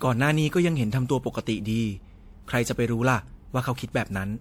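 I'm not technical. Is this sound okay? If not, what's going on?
No, not quite. From start to finish the speech has two kinds of digital roughness layered together. This is likely transcoding between lossy codecs: the recording was squeezed by one audio compression format, then squeezed again by MP3, adding fresh damage to the old.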